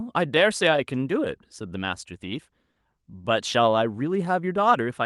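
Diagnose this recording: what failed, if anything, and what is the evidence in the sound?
The tempo of the speech wavers slightly and unevenly from start to finish, with small hiccups rather than one clean break. This is clock drift between sender and receiver at the network and jitter-buffer stage: the sender's clock runs about 3% slow, so the buffer keeps draining.

Between 0.27 s and 4.63 s the speech plays at 98% speed, slightly drawn out, adding roughly a tenth of a second overall. These repeated timing corrections come from the receiver's jitter buffer, which keeps stretching short pieces in the same direction to make up for the slow sender.

At 2.71 to 2.78 s one sound is held for an extra 40 ms, and nothing is lost. This is a short stall from a late packet: the buffer ran empty, the receiver extended the last sound, and delay grew by 40 ms. The Opus call path keeps its 12 kHz bandwidth.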